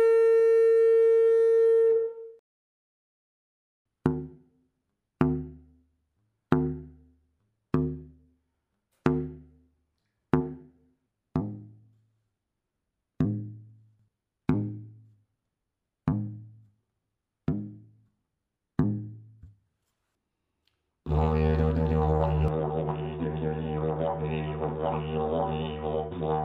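From 22.48 s to the end the sound turns dull and boxy with nothing above 3.8 kHz, drops roughly 5 dB in level and gains a faint new noise floor, with no gap at the change. The likely cause is an input switched to a poorer device mid-recording.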